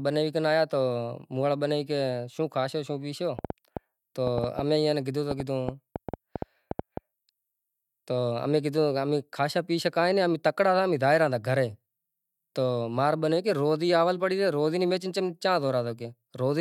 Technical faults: train of clicks

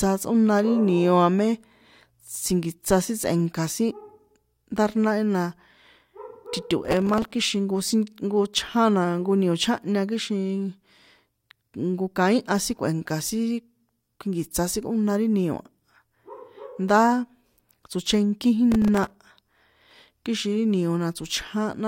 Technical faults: processor overload crackle

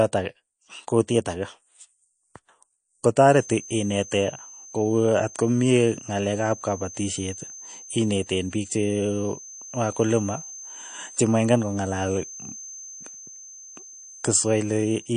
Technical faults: MP3 compression; feedback whistle

